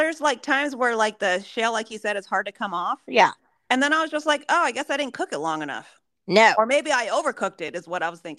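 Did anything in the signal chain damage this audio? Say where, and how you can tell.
Yes: a block of digital silence at 7.68 s, just after "maybe I", lasting about 3 ms, short enough to be heard as a tick or dip. The waveform drops abruptly to a flat line; the spectrogram shows a thin vertical gap. The cause is either an output buffer left unfilled at the driver stage or a calculation returning invalid values.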